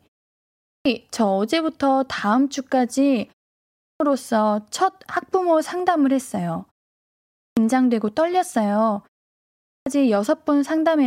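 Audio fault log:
0.41, 3.6, 7.14 and 9.46 s, clipped start after a pause: the output dozes off in each short gap, so the speech lurches back in with its first 0.40 to 0.44 s gone.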